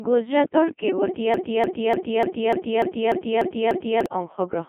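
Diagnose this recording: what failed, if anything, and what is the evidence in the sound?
The whole clip has gone through the Codec 2 vocoder, so this is a codec-stage failure, and a heavy one. The speech sounds robotic and buzzy because the decoder is rebuilding it from sine waves driven by pitch, voicing and a spectral envelope rather than passing the real waveform. The band sits around 200 Hz to 3.4 kHz with nothing above 3.8 kHz, and the degree of smearing points to the 2.4 kbit/s mode.

From 1.34 s to 4.06 s there's a broken-record loop: a chunk about 296 ms long plays back to back, identically, nine times, and whatever should have followed in that stretch never arrives. The cause is likely a stall at the stream or playback buffer stage, where the player kept re-sending the last fragment it held instead of reporting an underrun or going silent.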